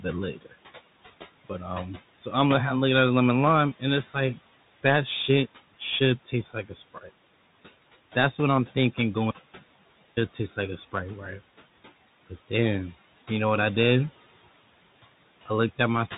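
Noise suppressor artifacts run through the whole clip. The suppressor pulls down whatever bands it judges to be steady noise, here by about 16 dB, frame by frame. The room noise, which sits about 18 dB below the speech, drops away in the pauses and swells back under each phrase.

The Bluetooth CVSD headset codec is also present from start to finish. Nothing above about 3.8 kHz gets through, which fits a 64 kbps CVSD headset link. Each sample is coded as a single up-or-down step whose size adapts, so bright, loud sounds outrun it and distort. S sounds come out scratchy, and a grainy hiss sits beneath the speech. The damage is plainly audible.

Speech cut by the noise suppressor occurs at 0.34 to 0.54 s and again at 6.94 to 7.1 s, touching about a tenth of a second of speech each time. The suppressor mistakes quiet speech for background and turns it down with the noise, by up to about 16 dB in the first instance and about 11 dB in the second. 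Soft consonants and word endings there sound swallowed and faint.

An audio dropout to silence runs from 9.31 to 10.17 s, losing about 0.86 s. It falls right after "what I'm thinking" and ends just before "taste like a". The sound stops abruptly and returns mid-flow. The gap is dead digital silence with no room tone, which points to the input likely being lost while the recorder kept writing silence. Anything said in that stretch is gone.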